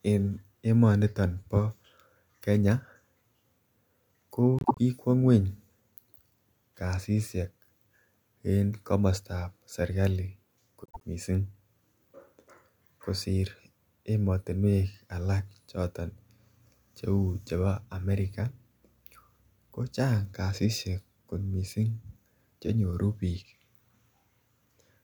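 Frames out of order occur twice, at 4.59 to 4.79 s and again at 10.84 to 11.04 s. Each time, two adjacent runs of frames, each about 78 ms and consistent with three frames, were decoded swapped. About 0.2 s of the speech plays with its halves exchanged, giving a garbled flutter. Nothing is lost.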